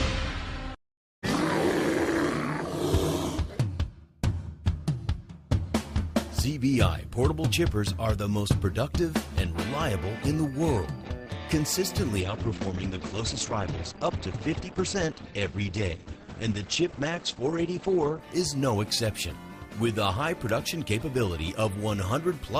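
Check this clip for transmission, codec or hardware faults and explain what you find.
One transmission fault is present: the adaptive stream drops to a lower bitrate from 12.2 s to 18.2 s. For those six seconds the quality steps down abruptly, with no gap or dropout, and coding artefacts become audible. The player switched to a leaner encoding when throughput fell, and the change in sound fits a move from about 64 kbit/s Opus to about 16 kbit/s before recovering.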